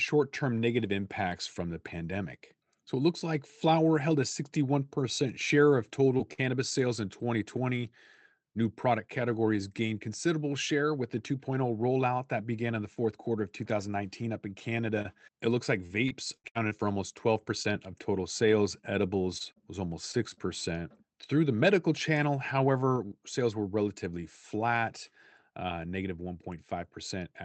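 Right around 6.17 s there's a short concealed packet loss: about 20 ms of speech never made it to the decoder in time, so the receiver carried the previous sound forward for roughly 17 ms and blended back in. You hear a tiny smear or wobble rather than a gap. The tail of that hole, 6.19 to 6.21 s, was a lost packet rebuilt from error correction. The next packet carried a low-bitrate copy, and that 20 ms frame comes out a bit grainier and noisier than its neighbours.

Just after, from 6.33 to 6.45 s, comes a burst of packet loss. About 40 ms of real audio is gone, patched with 46 ms of continued sound that fades as it runs, plus 8 ms of extra stretch. It comes across as a brief held buzz or hiss, and then the speech picks up slightly further along, with a sliver skipped. Inside it, 6.38 to 6.40 s is another 20 ms frame rebuilt from error correction, and it is rougher and noisier.

From 14.94 to 17.76 s the line goes choppy with repeated packet loss, the robotic kind. 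There are seven separate gaps, the longest 73 ms, about 280 ms missing in total and around 9% of the stretch concealed. Each hole is filled by extending the last sound, and the next one follows soon after, giving a choppy quality with bits dropping out. Roughly a fifth of a second of it was rebuilt from the error-correction copies, which adds grit on top.

Then 19.38 to 20.63 s does the same thing more lightly: four gaps, the longest 37 ms, about 100 ms missing and around 8% concealed. It gives a shorter bout of that choppy sound, with roughly a tenth of a second coming from rougher rebuilt frames.

Underneath it all, the call path's coding tops out at 8 kHz, which points to a wideband Opus setting somewhere around 64 kbps.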